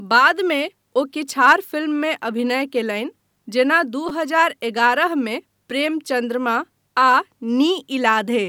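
At 1.30 s, 4.09 s and 5.70 s the speech catches on a repeated buffer: fresh audio arrived late, so the output replayed its most recent block of about 5.3 ms, which fits a 256-sample buffer. The first and third events repeat the block once; the second, just before "हजार एगारह", repeats it three times. Each repeat ends with a hard join, so these short blocks come across as a click or brief buzz rather than an audible stutter. Essentially no audio is lost.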